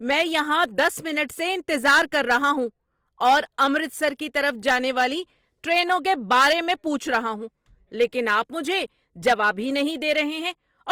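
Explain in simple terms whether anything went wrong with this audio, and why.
Throughout the speech, from start to finish, the sound is grainy and rough rather than swirly or muffled. That points to Opus compression as the likely cause, not MP3 or a narrowed bandwidth.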